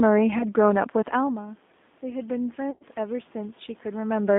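Throughout, the speech sounds thin, slightly rough and synthetic, cut off above about 3.6 kHz: the G.729 codec at 8 kbit/s is rebuilding it from a vocal tract model and sparse pulses.

From 0.38 to 0.46 s the sound smears briefly into a fading tail, then recovers slowly. This is VoIP packet loss concealed by the speech codec, where about 20 ms went missing, which fits one lost packet, and the decoder extrapolated.

From 1.15 to 4.34 s, after the talker moves and the level drops about 14 dB near 1 s, voice and background swell together by about 6 dB. The automatic gain is rising to compensate for the quieter input.

From 2.71 to 2.83 s a longer, fading stretch replaces the speech, and the voice stays weak just afterwards. This is concealed packet loss again, with about 100 ms lost, which suggests five consecutive packets.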